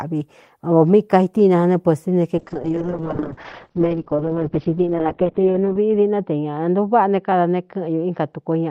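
A call bitrate drop from 2.38 s to the end turns this speech rough and muffled: the encoder falls from 32 to 9 kbps, cutting bandwidth from 20 kHz to 4 kHz.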